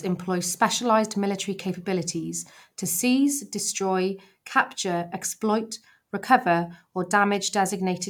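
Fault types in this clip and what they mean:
No audible faults detected.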